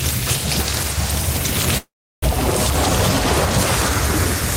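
At 1.77 s the sound cuts out until about 2.24 s, a long network dropout is the likely cause. The last bit smears into a fading buzz, then roughly 340 ms of near-silence, and it resumes about 400 ms further on, with a slight timing shift too.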